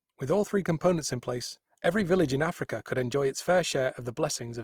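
Throughout the speech, a plainly audible grainy, rough texture suggests likely Opus compression at a low rate, around 24 kbps, in music mode. Bands are noise-filled rather than dropped, so it sounds grainy, not swirly like MP3.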